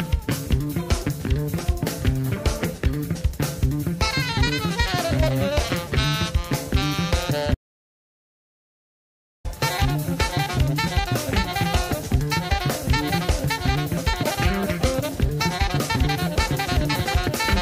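At 7.55 s the sound cuts off abruptly and stays gone until 9.45 s, a gap of about 1.9 s. That's an audio dropout to silence: the line goes dead, no hiss or room tone at all, and then the sound snaps back mid-flow. Likely the input was lost for a moment, say a loose connection or a brief mute, while the recorder kept writing. Whatever happened in those two seconds is simply gone.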